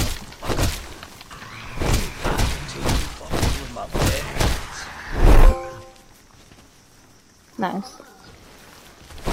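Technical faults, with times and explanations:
Nothing stood out as a technical problem on listening.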